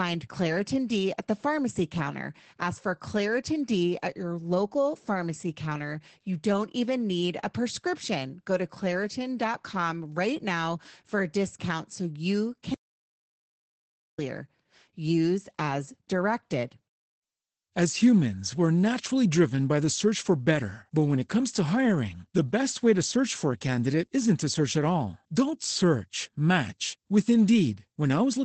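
From start to finish the speech carries Opus voice compression in its SILK mode. Nothing survives above about 8.7 kHz, and the coarsely coded excitation leaves voices muffled, hoarse and faintly robotic. This is plainly audible damage that points to a low rate near 12 kbps.

From 12.74 s to 14.19 s there is an audio dropout to silence. For 1.44 s the signal falls to silence with no room tone, then resumes mid-flow. The input was likely lost while recording continued, and whatever occurred in the gap is gone.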